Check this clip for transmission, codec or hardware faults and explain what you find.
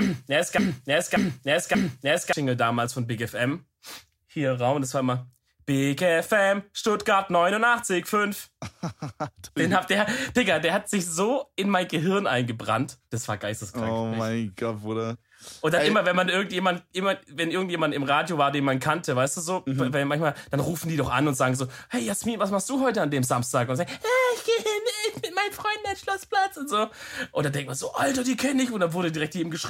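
One fault is present, right at the start. From 0 to 2.33 s, already under way when the clip begins, a broken-record loop repeats the same 0.58 s fragment back to back, three times. A stalled player or stream resending its last held fragment is the likely cause, and the audio that belonged there is lost. On a spectrogram the identical block tiles at even 0.58 s intervals. In the waveform the same envelope recurs exactly.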